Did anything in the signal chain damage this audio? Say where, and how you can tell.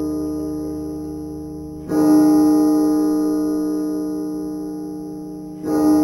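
Yes, at the sample-rate conversion stage. Imaging from sample-and-hold upsampling runs throughout. A metallic fizz tracks the level of the sounds, sitting about 25 dB below them. The first mirror band lies between 5.5 and 11 kHz, which points to an 11 kHz source held into 44.1 kHz without a smoothing filter.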